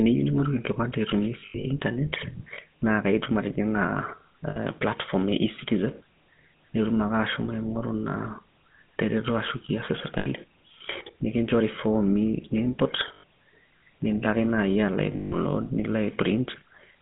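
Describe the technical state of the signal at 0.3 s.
At 0.3 s the speech carries GSM full-rate codec damage, present throughout the clip. Rebuilding the voice from a vocal-tract model driven by coarse regular pulses leaves a buzzy, gravelly grain within a 150 Hz to 3.6 kHz band, unlike a plain telephone band-limit, which sounds smooth.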